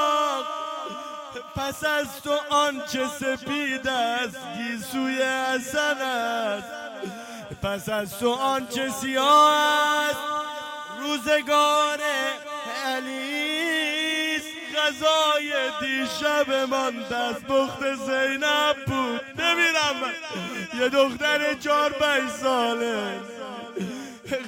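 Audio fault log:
Nothing wrong turned up here; it all sounds just as it should.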